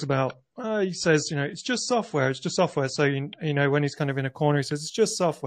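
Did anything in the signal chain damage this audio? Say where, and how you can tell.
Yes. Adaptive stream starting at a low bitrate, 0 to 3.97 s, network/playback stage: nothing above 8.4 kHz and harsher codec artefacts, which fits a 32 kbit/s MP3 rendition. Quality steps up to 128 kbit/s MP3 without a gap just before "kind of in a", once the player had measured the connection.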